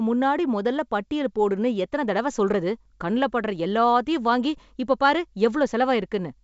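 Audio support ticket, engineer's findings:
Nothing stood out on listening to this speech over the G.722 wideband telephone path at 64 kbit/s, with the band extending to about 7.7 kHz.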